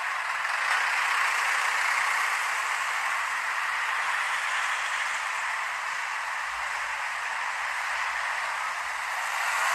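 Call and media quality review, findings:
No audible faults found; nothing to report.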